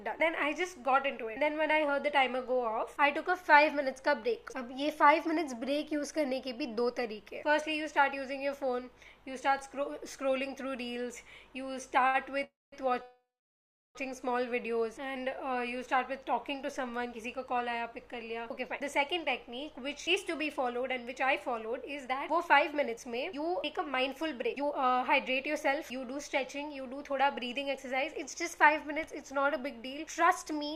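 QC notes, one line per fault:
12.07 to 12.16 s, short stall from a late packet. A packet arrived late and the jitter buffer ran dry, so the last sound was held for 65 ms. Playback then resumed from the same point. Nothing is lost, but that sound lingers with a faint buzz.
12.44 to 12.74 s and 13.02 to 13.97 s, call audio freeze. The audio stops and the last sound is stretched into a fading buzz, then silence. The first gap lasts 285 ms with 210 ms silent, the second 927 ms with 710 ms silent. Packets were likely held up in transit. Playback then resumes where it stopped.
16.11 to 30.65 s, jitter buffer speed-up. After the stalls the buffer held more delay than it needed. Short pitch-period slices were cut out repeatedly, about a second in total. The audio plays roughly 6 percent fast at unchanged pitch and sounds slightly hurried.
22.08 s, short concealed packet loss. About 20 ms of audio never reached the decoder. 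The gap was bridged by continuing the preceding sound and blending back in. It is heard as a brief smear or wobble, and a very short sound there may drop out.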